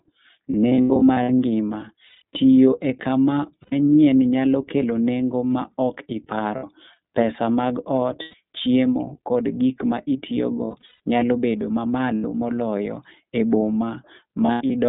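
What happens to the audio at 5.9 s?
At 5.9 s you're hearing the iLBC codec, which runs through the whole clip. Each 30 ms frame is coded on its own, so the speech comes out a bit rough and synthetic, squeezed into roughly 150 Hz to 3.7 kHz, and the rate points to 13.33 kbps.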